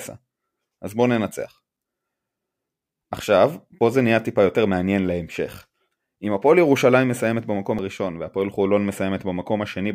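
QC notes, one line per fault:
3.81 s and 7.79 s, audio missing between chunks: the speech skips forward twice, roughly 4 s apart, each time losing about 20 ms with the two sides butted together, and a faint tick may mark the seam. The likely cause is a recorder handing over between 4-second chunks and dropping a sliver each time. On a waveform the cycles jump abruptly with no silent gap. A spectrogram shows a thin vertical line where harmonic traces break and resume misaligned.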